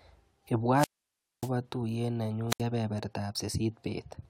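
The wireless microphone's radio signal faded and the receiver's squelch cut the output, giving a wireless microphone squelch dropout from 0.72 to 1.53 s, with a 589 ms silent hole after a hiss swell. A shorter one at 2.49 to 2.61 s mutes the speech for 71 ms.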